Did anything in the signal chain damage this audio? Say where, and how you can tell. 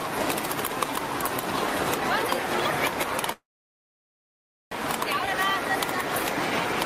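Yes, a call audio freeze from 3.32 to 4.74 s, at the network stage. The last sound trails off briefly, then about 1.3 s of silence follows before the audio resumes where it stopped, with nothing lost, likely from delayed packets draining the jitter buffer.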